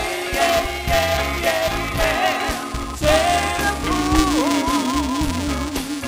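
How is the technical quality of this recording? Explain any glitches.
The recording has a persistent technical fault. Buffer tearing runs through the whole clip. The program filling the ring buffer and the hardware reading it have drifted out of step. They cross inside every period. A small slice of each buffer, a few percent, holds audio from about 5 ms earlier. Hard joins sit on both sides of it. The result is a robotic buzz at 375 Hz, the buffer rate, which fits a 128-sample buffer. It rides on the sound and disappears when the signal stops.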